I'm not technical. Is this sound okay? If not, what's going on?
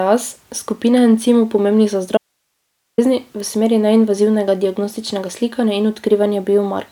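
No. From 2.17 to 2.98 s, the speech cuts out abruptly for about 0.8 s, leaving only a faint hiss before it snaps back. This is an audio dropout to a faint residue, likely a brief signal loss while the recording line stayed switched on.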